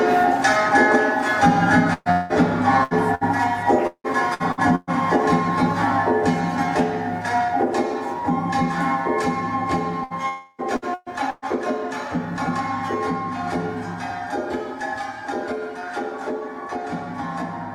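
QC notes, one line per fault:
1.93–3.24 s and 3.87–4.90 s, repeated packet loss (robotic sound): four gaps in each stretch, the longest about 0.18 s, were bridged by extending the preceding sound. Roughly a third of each stretch is patched audio, so it turns choppy, with about 0.42 s lost per stretch.
10.04–10.13 s, 10.76–10.85 s, 10.94–11.09 s and 11.30–11.45 s, burst of packet loss: runs of packets were lost or arrived too late to play, leaving gaps of 60 ms, 60 ms, 120 ms and 120 ms. Each was filled by continuing the last sound and fading it, heard as a brief held buzz or hiss before the audio resumes past the missing part.
10.28–10.61 s, long network dropout: likely a lapse in arriving audio, about 0.3 s of which is never played. The gap is covered entirely by a continuation of the last sound that fades as it runs, with no true silence, before the audio picks up again further on.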